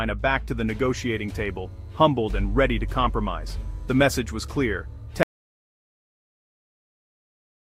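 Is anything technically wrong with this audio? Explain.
Yes, there's one problem. At 5.23 s the audio drops out to silence and never comes back. Everything from there to the end is dead silence, with no room tone or noise floor at all. That points to the input going away, likely a disconnected device, a broken link or an accidental mute, while the recorder kept writing. Whatever came after 5.23 s just isn't there.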